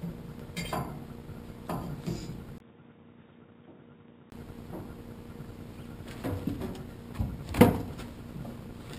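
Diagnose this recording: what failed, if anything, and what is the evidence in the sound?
From 2.58 to 4.32 s the sound turns dull and roughly 10 dB quieter, with nothing above 3.8 kHz, after a 20 ms gap. This is likely the input switched to a poorer, narrower-band device at the driver stage. A spectrogram would show a flat ceiling at 3.8 kHz, and the waveform a brief gap and smaller envelope.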